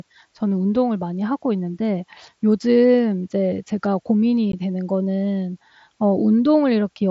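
At 4.52 s the speech drops out for about 15 ms, an unconcealed Bluetooth headset packet loss, which fits two lost headset frames replaced by silence. It sounds like a brief hole with abrupt edges, and a waveform or spectrogram shows a narrow vertical gap with abrupt edges through the mSBC wideband band.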